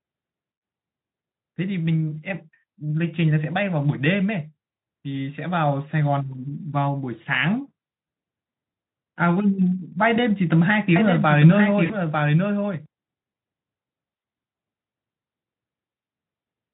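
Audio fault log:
10.96–12.86 s, doubled audio track: a second full-band copy of the speech runs about a second behind at roughly 5 dB lower, likely from an edit holding two copies out of step. The waveform shows a displaced duplicate with abrupt edges; the spectrogram shows echoed patterns without decay smear.
11.85–11.95 s, VoIP packet loss concealed by the speech codec: 40 ms of lost audio is filled by the decoder extending its last pitch and filter, so the speech stretches into a fading buzzy tone or coloured noise. The spectrogram shows smeared energy fading out, and the waveform shows a decaying envelope.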